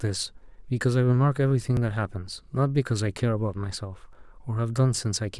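A speech clip with two small dropouts, each heard as the sound jumping ahead with no gap of silence: one at 1.77 s losing around 20 ms, and a shorter one at 4.13 s losing around 10 ms. That's most likely a dropped buffer (overrun), where the recording software didn't pick up a block of samples before the hardware overwrote it, so the audio on either side got spliced straight together.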